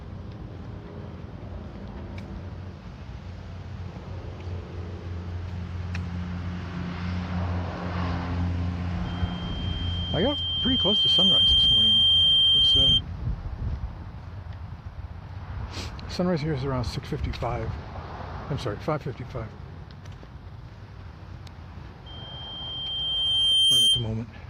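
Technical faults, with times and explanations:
9.05–13.01 s and 22.06–24.09 s: loudspeaker feedback squeal. The microphone re-amplifies the loudspeaker until loop gain exceeds one at 3.2 kHz, producing a tone that swells over one to two seconds to about 15 dB above the sound.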